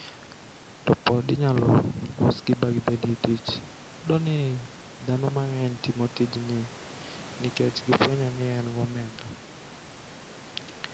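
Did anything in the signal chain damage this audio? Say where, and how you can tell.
No, nothing in the signal chain damaged this audio.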